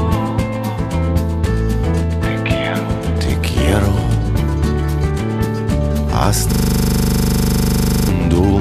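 At 6.53 s the audio locks into a system hang loop until 8.09 s. The machine stalled while the hardware kept replaying one 40 ms slice of its buffer, about 39 times, giving a hard, rattling buzz at 25 Hz.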